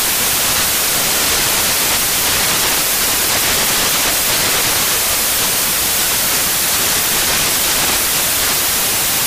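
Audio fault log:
Throughout: samples built from the wrong bytes. The reader is assembling each sample from misaligned or swapped bytes, so the rapidly changing low-order bits land in the high-order position and dominate every value. The result is loud, harsh broadband noise across the whole clip. What separates it from ordinary added noise or clipping is that the hiss follows the signal rather than sitting at a steady floor.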